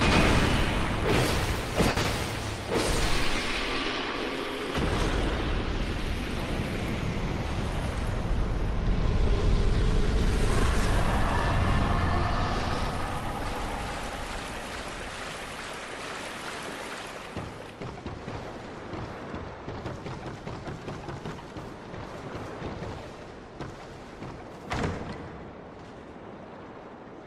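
A short stall from a late packet hits at 1.89 s and again at 12.61 s: the jitter buffer ran dry, so the last sound was held for 70 ms and 20 ms, with nothing lost.

Short concealed packet loss follows at 2.00 s, where 40 ms never arrived and was filled by extending the preceding sound, giving a brief smear.

A jitter buffer speed-up runs from 17.90 to 18.19 s, trimming about 50 ms of pitch periods so the sound plays at 114% speed, hurried but unchanged in pitch.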